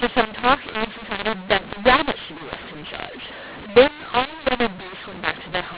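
Telephone speech, band-limited below 4 kHz in a way that fits 8 kHz G.711 sampling, suffers from a mu-law and A-law mix-up throughout: samples coded as A-law are decoded as mu-law, scrambling levels so the speech turns harsh and distorted while pauses fill with hiss. Unlike simple clipping, the quietest moments are raised rather than the peaks flattened.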